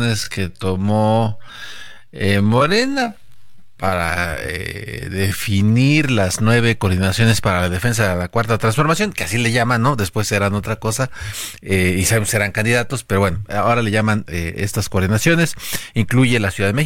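From the start to about 5.96 s the speech runs slow, at roughly 0.56 times normal pace, yet the pitch stays where it should. That's a time-stretched section, most likely from software lengthening that stretch to fill a set duration and holding pitch steady by repeating short pieces of the audio. So the opening drags noticeably, and at 5.96 s the pace snaps abruptly back to normal speed.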